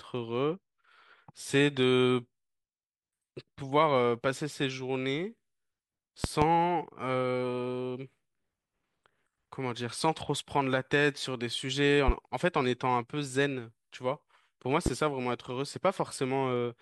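At 6.24 to 6.45 s the speech is hit by a loud pop in two quick bursts, roughly 20 dB above the voice. A second, single pop follows at 14.86 to 14.90 s, about 15 dB over the signal. Each is likely a voltage spike from a plug, switch or static discharge. The speech continues underneath. A waveform shows tall, near-vertical spikes, and a spectrogram shows bright full-height vertical streaks.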